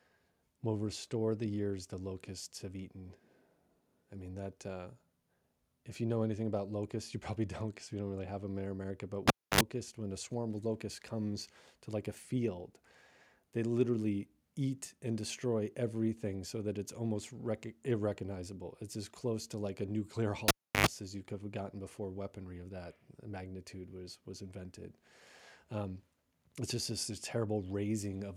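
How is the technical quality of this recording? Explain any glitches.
The speech is interrupted twice by a cable being pulled and plugged in, at 9.28 to 9.61 s, just before "when a swarm of", and at 20.48 to 20.87 s, just before "as you could have". Each starts with a pop as the live connection breaks, then near silence for about 0.28 s and 0.33 s. A 50 Hz mains buzz follows, lasting 65 ms and 93 ms, while only the plug tip makes contact, and a second pop marks the signal returning.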